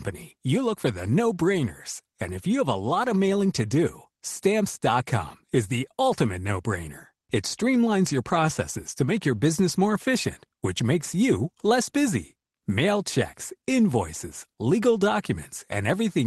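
Speech clip with no technical faults to report.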